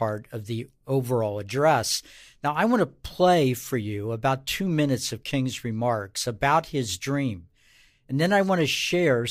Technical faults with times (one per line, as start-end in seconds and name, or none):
none